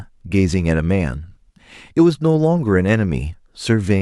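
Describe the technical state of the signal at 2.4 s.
At 2.4 s the speech carries crude rate conversion, a fault that runs through the whole clip. The sample rate was changed by plain linear interpolation with no proper filter. The small ratio fits a move from 44.1 kHz to 48 kHz. The interpolation error repeats in a fixed pattern and forms shifted, inharmonic copies of the speech. It sits faintly, well below the speech. It is heard as a gritty, inharmonic fizz that follows the louder and brighter sounds.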